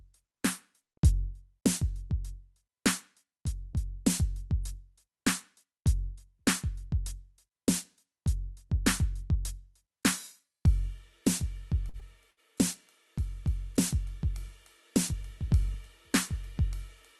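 Music passed through a WebRTC call path, with the top end stopping near 12 kHz. At 11.89–11.97 s and 12.31–12.40 s the sound briefly holds and smears with a slight buzz or dip. Each is a short stall from a late packet: the jitter buffer ran dry, so the receiver stretched the last sound for about 44 ms and then 61 ms, resuming without losing material but adding delay.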